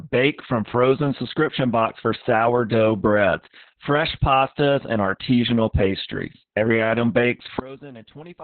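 Opus voice compression runs through the whole speech clip. The band is cut to about 4 kHz, so the speech sounds muffled and boxy, and the excitation is coded so coarsely that it comes out hoarse and slightly robotic. Heavy damage of this kind, with SILK's linear-prediction coder working alone, fits a very low bitrate of around 6 kbps. Long coding frames of 60 ms are used as well.

A sudden gain jump comes at 7.6 s. The level drops by about 19 dB in one step and stays down until the end of the clip. The speech and the background noise fall together, without any fade, which points to the digital gain changing from one sample to the next. The likely cause is a gain setting or bit shift applied without a ramp.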